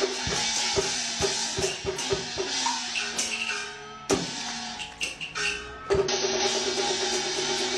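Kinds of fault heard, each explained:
Compressed frames skipped: near 6.04 s the audio leaps ahead by roughly a tenth of a second, which fits two 46.4 ms frames never being played.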